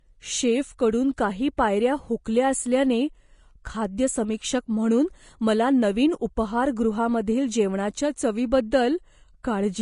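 Vorbis compression runs through the whole recording. Nothing is present above 10.5 kHz, and the upper band that remains is coarse and hissy, with a grainy roughness on the speech that is plainly audible. The likely cause is a low-quality Vorbis encode, consistent with a rate near 33 kbps. At that setting the encoder lowers its cut-off and quantises the treble so crudely that fine detail is replaced by noise of similar energy.

Pre-echo appears at 1.57 s, where an 11 ms wisp of hiss arrives just before a sharp onset and softens it. A transform codec spreads its quantisation error across a whole block, so when a sudden attack lands late in that block, noise scaled for the loud part also fills the quiet stretch leading up to it. The attack is then heralded by this short smear of noise.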